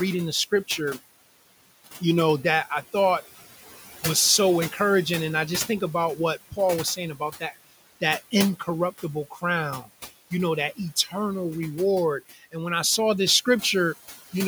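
The background noise pumps from start to finish, sinking in the pauses and rising beneath the speech. These are noise suppressor artifacts: the room noise, sitting about 16 dB below the speech, is pushed down by about 14 dB frame by frame.

From 9.3 to 9.43 s and again from 12.31 to 12.54 s, parts of the speech turn faint and swallowed, as if briefly pulled away from the microphone. This is speech cut by the noise suppressor, which mistook these quieter speech sounds for noise and turned them down with the background, by about 12 dB and 13 dB at the deepest point, for roughly a tenth of a second the first time and about 0.15 s the second.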